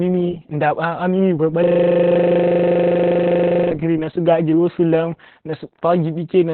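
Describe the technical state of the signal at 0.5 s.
At 0.5 s the speech carries Opus voice compression, present throughout the clip. The codec's SILK linear-prediction mode is running in narrowband, so nothing survives above 4.3 kHz, and the excitation is coded very coarsely, which fits a bitrate around 8 kbps. The damage is heavy: the speech sounds muffled and telephone-like, with a hoarse, slightly robotic buzz where the fine structure of the voice has been approximated rather than kept.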